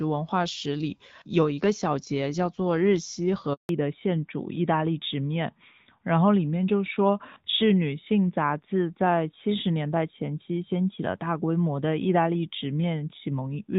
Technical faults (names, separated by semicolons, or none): handover gap; fallback to narrowband